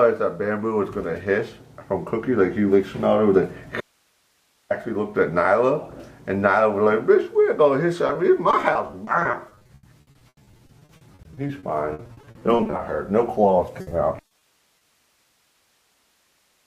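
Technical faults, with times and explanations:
3.81–4.70 s, audio dropout to a faint residue: the sound cuts abruptly for about 0.9 s, leaving only hiss about 45 dB down, likely a signal break with the path still live, not a pause.
8.07–12.81 s, repeated packet loss (robotic sound): 48 gaps up to 80 ms, about a quarter of the span patched by extending the last sound, giving choppy audio with pieces missing rather than one smear.
13.81–14.43 s, repeated packet loss (robotic sound): five gaps up to 60 ms, again patched by continuation, so the stretch turns briefly choppy.
14.8 s, short concealed packet loss: a single 20 ms hole filled from the preceding sound, heard as a brief smear or wobble rather than a choppy run.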